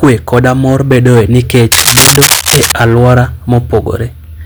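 From 1.72 to 2.73 s, just after "koda mor bedoe nikech", cable scratch noise rasps over the speech at a little above its level, likely from a worn cable or connector shifting. The waveform shows ragged, uneven spikes, and the spectrogram shows dense broadband vertical streaks.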